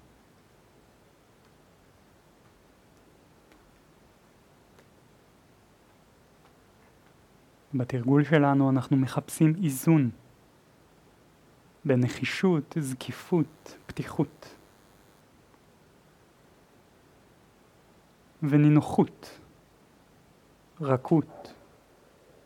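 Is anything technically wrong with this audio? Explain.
Yes, there is one fault: DECT cordless phone buzz from 13.08 to 15.20 s. A nearby DECT handset or base station transmits a short radio burst every 10 ms, and the audio circuitry rectifies that RF into the signal, producing a thin, steady buzz at a 100 Hz repetition rate, sitting faintly at roughly 40 dB below the programme. On a spectrogram it appears as an evenly spaced comb of horizontal lines at multiples of 100 Hz. Zoomed in on the waveform, small regular spikes recur every 10 ms.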